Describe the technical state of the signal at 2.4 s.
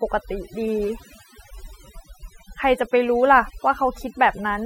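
At 2.4 s the speech carries overdone noise removal, present throughout: bands near the noise estimate are cut hard, taking quiet parts of the voice with them and leaving twinkling near-silence.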